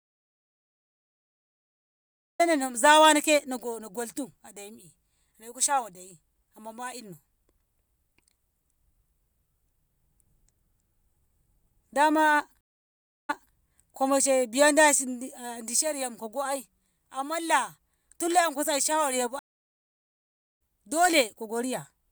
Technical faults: audio dropout to silence; stream reconnect

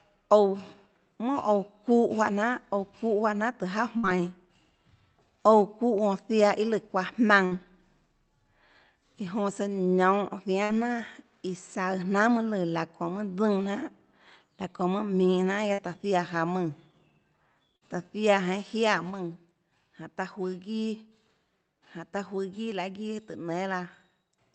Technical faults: burst of packet loss

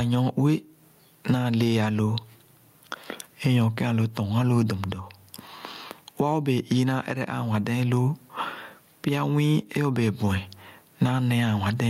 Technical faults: gain pumping

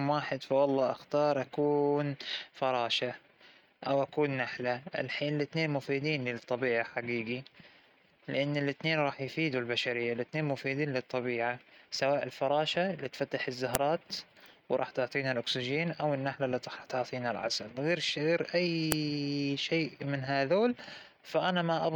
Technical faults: file header played as audio

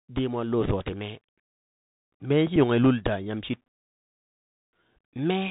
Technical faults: Bluetooth CVSD headset codec; Bluetooth headset packet repeated

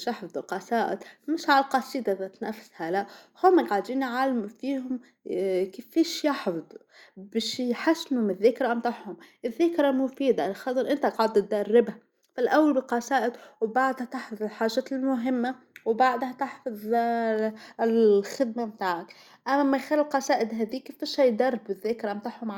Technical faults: none

